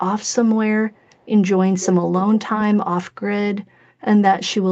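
From 0.94 to 1.25 s, an echo leak: a very faint, discrete copy of the speech 311 ms late, likely slipping past a far-end echo canceller, unlike reverb's continuous tail.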